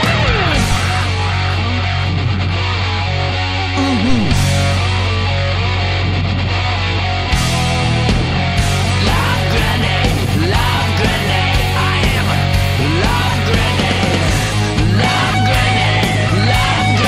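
Phantom power thumps occur at 0.72 to 0.78 s and again at 4.10 to 4.58 s. In each, a supply being switched on a live input sends a DC step through the coupling capacitors, and it comes out as a deep low-frequency thud. The first peaks near about -4 dBFS and dies away within about 14 ms. The second, peaking near about -6 dBFS, rings on longer with a decay of about 109 ms.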